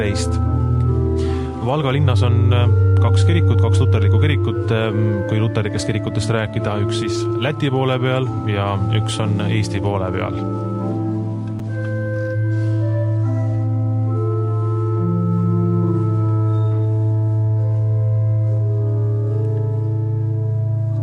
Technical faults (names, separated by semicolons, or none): none